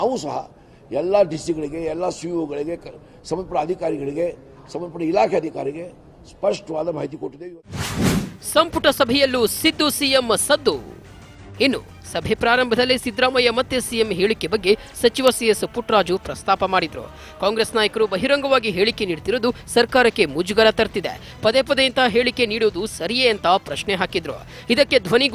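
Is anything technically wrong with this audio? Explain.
No, nothing technically wrong turns up anywhere in this recording.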